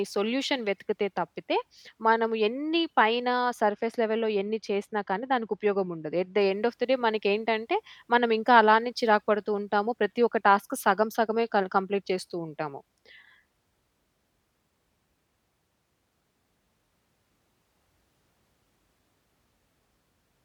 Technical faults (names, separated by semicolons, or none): de-emphasis applied wrongly